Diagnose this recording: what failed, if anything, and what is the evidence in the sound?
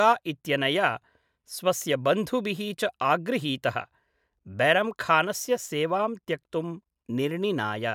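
Nothing failed in this recording, and the sound gives no evidence of any fault.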